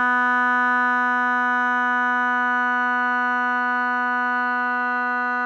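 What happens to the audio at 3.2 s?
Nothing goes wrong at 3.2 s; the music plays through that moment intact, with no dropout, click or glitch.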